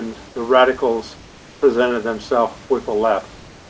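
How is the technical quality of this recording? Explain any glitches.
Two short stretches of background are replaced by comfort noise, and the whole recording stops at 8 kHz, as a wideband call codec would leave it.

Comfort noise in place of the background appears at 0.28 to 0.36 s, just before "radicals presented themselves", and again from 3.36 s to the end. The room's background turns into even, featureless hiss, about 4 dB and about 2 dB quieter. The likely cause is discontinuous transmission, with the receiver synthesising noise during pauses. A spectrogram shows smooth, uniform patches; the waveform shows flat, even fuzz.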